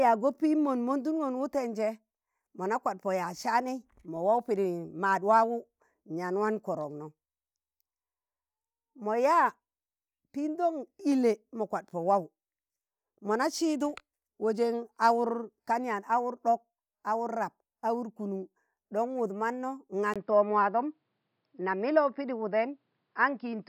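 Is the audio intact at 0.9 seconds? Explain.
Yes, at 0.9 seconds the speech plays through cleanly, with no dropout, click, distortion or other fault at that moment.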